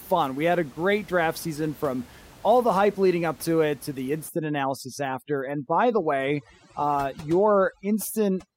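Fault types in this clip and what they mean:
Overdone noise removal: from 4.29 s the background drops and breaks up into twinkling specks, unlike codec smearing.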